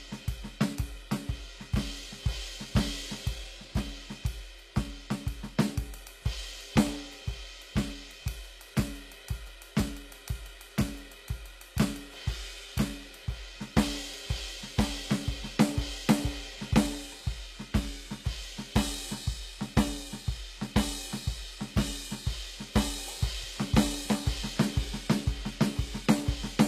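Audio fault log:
Throughout, HE-AAC compression: the music's treble sounds gritty and metallic, with nothing above 14.9 kHz, likely from low-bitrate treble rebuilt from copied lower bands.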